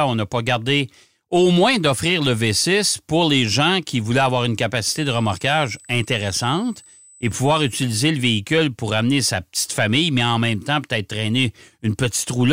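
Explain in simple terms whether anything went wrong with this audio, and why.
A thin, steady, high-pitched whine appears from about 4.96 to 7.77 seconds, starting right after "qui voulaient avoir une", and sits faintly beneath the speech. This is USB whine. A USB connection pulls power in rapid, regular bursts eight thousand times a second, and that rhythm leaked into the audio through the power or ground wiring, turning into a fixed 8 kHz tone that hangs in the background until it stops.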